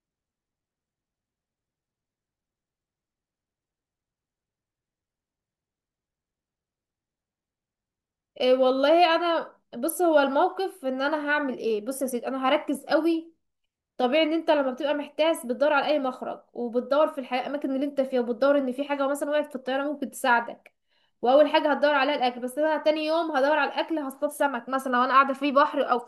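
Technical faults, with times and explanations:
Listening closely to the speech turned up nothing that stood out as a technical problem at any point.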